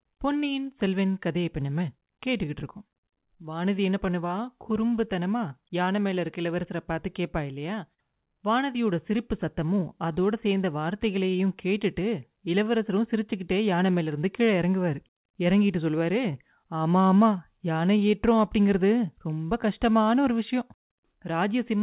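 Clock drift between sender and receiver runs through the whole clip: the sending side's clock is slow by roughly 4 percent, so samples arrive a little late and the receiver's jitter buffer keeps drifting toward empty. It has to keep making up the shortfall all the way through, and the result is a speech clip whose timing never quite settles, with small hiccups recurring at uneven intervals. The call path itself, band-limited to nothing above 4 kHz in a way that fits G.711 mu-law at 64 kbps, carries that narrowband coding character throughout.

Repeated timing corrections run from 0.05 s to 21.82 s, which is how the receiver copes with the slow sender. It keeps inserting short repeated pieces to stretch the audio so the buffer stays fed, bringing playback to 96 percent speed and adding about a second over the span. All the edits go in the same direction but at uneven spacing, so they come across as a faintly dragging, slightly unsteady tempo with occasional tiny stutters.

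A short stall from a late packet occurs from 7.94 s to 8.00 s. A packet missed its due time, the jitter buffer briefly ran dry, and the receiver held the last sound for 42 ms until the data turned up, then carried on from the same point. Nothing is lost, but the delay grows by 42 ms, and the held moment sounds drawn out, with a slight buzzy or flattened quality before normal flow resumes.

Scattered short gaps appear between 19.63 s and 20.99 s, where about three packets went missing or late one at a time. The receiver bridged each by extending the preceding sound, the longest patch around 40 ms and only a few percent of the stretch concealed overall. No content drops out, but the passage picks up brief ticks and small smeared hiccups as each hole is papered over.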